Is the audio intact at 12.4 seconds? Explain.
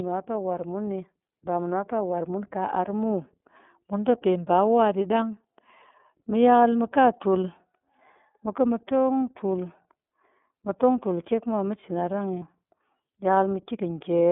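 No. From 12.39 to 12.43 s the sound briefly turns into a held, slightly buzzy, breathy vowel-like tone, then snaps back to normal almost immediately. These are lost iLBC frames. The gap is about 30 ms, consistent with a single dropped 30 ms frame. The decoder filled the hole by repeating the last pitch cycle blended with noise. Because each iLBC frame is coded independently of the one before it, the next frame decodes cleanly and no smearing carries past the gap.

Around that moment the speech also sounds thin, muffled and a little rough and synthetic, with plainly audible coding damage. This is the iLBC codec at work. Only a narrow telephone band from roughly 200 Hz to 3.5 kHz gets through, so the brightness above it is gone. The codec models the excitation of each 30 ms frame on its own, which gives the gritty, slightly artificial texture, and the rate fits iLBC's 13.33 kbps mode.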